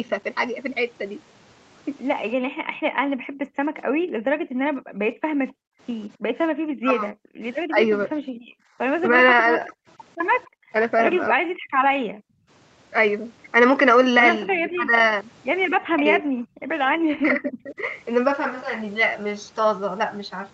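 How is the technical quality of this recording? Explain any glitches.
Pretty rough in places. The call's echo canceller is working hard and you can hear it, on top of a band-limited call path with nothing above 8 kHz.

Background gated by the echo canceller: from 2.36 to 8.78 s, 10.49 to 12.48 s and 16.52 to 16.71 s, the room sound dips out, by about 40 dB in the first two and about 27 dB in the last. The canceller clamps the mic while the far end's loudspeaker plays, then releases it.

Echo leak: two brief scraps at 5.48 to 5.52 s and 10.43 to 10.49 s, a faint delayed copy of the voice trailing by 258 ms, roughly 35 to 40 dB down. Some loudspeaker sound likely slipped past the canceller and came back.

Speech suppressed in double talk: from 6.82 to 9.71 s, at 11.33 to 11.44 s, and from 14.47 to 17.74 s, the talker's voice sags or chops out in pieces. The dip is mild in the first stretch, close to a full cutout at 11.33 s, and moderate in the last. 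This is likely the canceller mistaking overlapping talk for echo and ducking everything.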